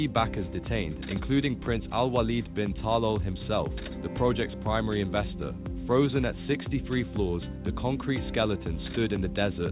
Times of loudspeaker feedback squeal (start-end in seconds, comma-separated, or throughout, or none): none